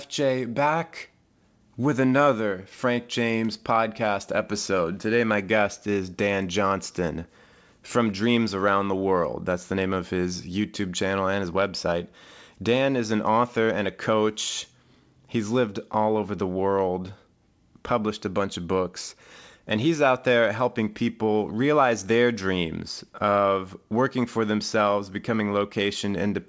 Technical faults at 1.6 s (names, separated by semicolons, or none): none